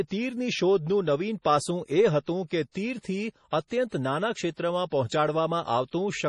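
Across the whole speech clip, a watery, swirling texture and a hard spectrogram ceiling at 11.3 kHz point to heavy, likely MP3 compression, consistent with a 32 kbps encode. Pre-echo appears at 2.47–2.51 s, 2.71–2.75 s and 3.50–3.53 s: block-spread quantisation noise leaks hiss ahead of each attack, visible as a smear preceding the onset.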